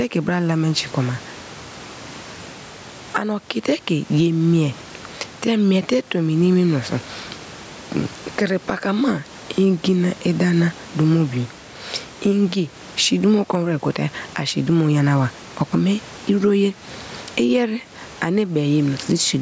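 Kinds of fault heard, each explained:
Gain pumping: the gain ducks by around 15 dB under each loud stretch of speech, likely from gain set too high with a fast limiter. Unlike a gate, it does not cut the sound out, and dynamics sound squashed.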